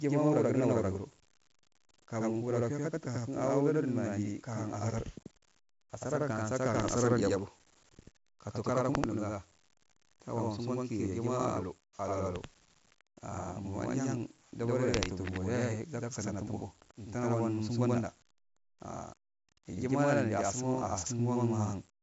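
Channel delay (doubling) runs through the whole speech clip. One side of the stereo pair arrives about 85 ms after the other, and summing both to mono leaves a distinct second copy trailing each syllable at equal strength. The lag fits a 4096-sample buffer at 48 kHz. At that spacing the copy does not blend into the original. It lands as a slap echo that makes every phrase sound doubled.

4-bit ADPCM compression is also present throughout, and heavily. Each sample is coded as a small 4-bit correction to a predicted value, with the step size adapting as the signal changes. The resulting error tracks the level of the speech, so a gritty hiss rides on every loud stretch and sharp attacks distort where the step lags behind. Nothing is heard above about 7.7 kHz, which points to a sample rate near 16 kHz at 64 kbps and gives a dulled top end.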